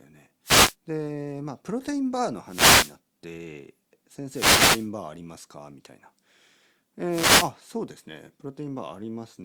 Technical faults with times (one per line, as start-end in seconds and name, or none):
0.44-0.75 wireless microphone noise hit
2.46-2.97 wireless microphone noise hit
4.27-4.89 wireless microphone noise hit
7.09-7.52 wireless microphone noise hit